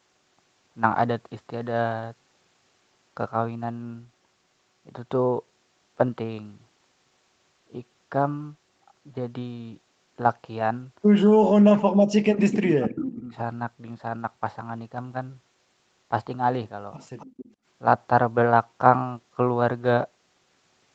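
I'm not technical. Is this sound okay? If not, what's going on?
No, there are two problems. From about 11.4 to 13.4 seconds, the speech drops away almost to nothing. That's speech suppressed in double talk, likely the echo canceller mistaking this talker for echo while the other side spoke, and turning everything down.

Around 17.2 to 17.5 seconds there's a faint extra copy of the voice trailing about a quarter of a second behind. That's an echo leak, likely from a loudspeaker on one end whose echo canceller didn't catch everything, so some got sent back.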